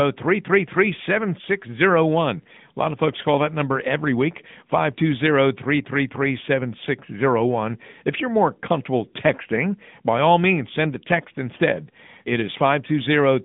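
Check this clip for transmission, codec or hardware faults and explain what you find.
The whole thing has been through an AMR narrowband mobile codec, start to finish. Nothing gets past about 3.7 kHz, and the usable band sits roughly between 150 Hz and 3.6 kHz, so the speech sounds boxed-in, like an old phone call. The codec rebuilds the voice from a vocal-tract model fed by a handful of pulses per frame, and the damage is plainly audible as a buzzy, synthetic edge, which fits an upper mode around 10.2 kbps.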